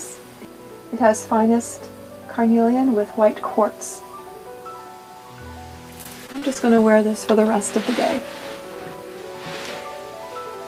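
From 6.03 to 6.80 s there is repeated packet loss, giving a robotic sound: about half a dozen short dropouts, the longest about 36 ms, each patched by extending the preceding audio. The fill makes the sound choppy.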